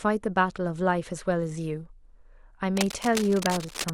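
From 2.77 s to 3.9 s, cable scratch noise rasps over the speech, about 10 dB below it. A worn cable or connector likely shifted, making the contact crackle.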